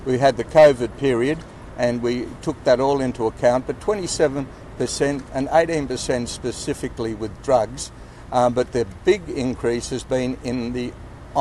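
Weak DAB reception let bit errors slip past the error correction into the MP2 audio data, and from 7.47 to 7.63 s this produces DAB burbling. With a bit error rate of around a tenth of a percent, corrupted samples put short blips of noise in single sub-bands, and corrupted scale factors make individual sub-bands jump in level for up to a frame. The result is a short burst of burbling over the audio, lasting about 0.17 s, which fits a run of several damaged frames.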